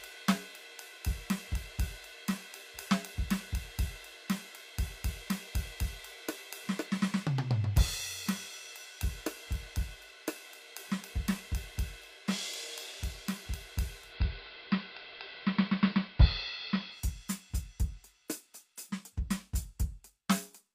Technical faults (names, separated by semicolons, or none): digital radio blending to analogue